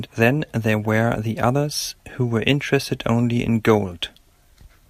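No technical faults can be heard anywhere in this speech recording.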